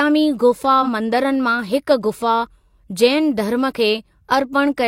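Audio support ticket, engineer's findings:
Smeared, noisy patch in the speech at 0.82–0.89 s. AAC frame loss with concealment: the decoder papered over the gap by reusing the last good spectrum. The 70 ms smudge fits a single dropped frame of about 43 ms.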